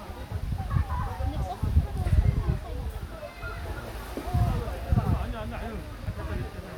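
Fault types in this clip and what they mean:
No technical faults are audible anywhere in this recording of sounds.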